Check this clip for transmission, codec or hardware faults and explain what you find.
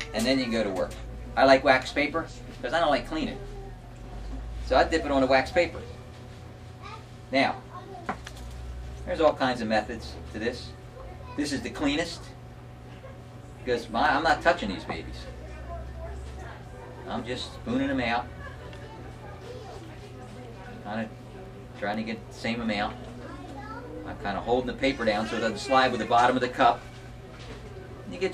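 Two bursts of CD scratch ticks, from 13.33 to 14.30 s and from 21.46 to 22.66 s. A disc blemish defeats error correction once per revolution, so the player conceals each hit, leaving regular ticks of about five per second, each only a couple of milliseconds long.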